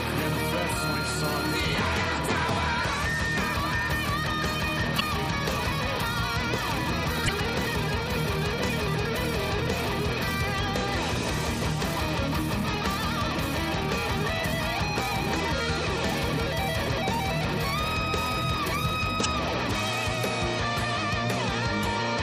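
Damaged data in a compressed stream disrupts the audio five times, each lasting about 40 ms: 4.98–5.02, 7.25–7.29, 12.61–12.64, 16.84–16.88 and 19.22–19.26 s. Corrupt frames force the decoder to resynchronise.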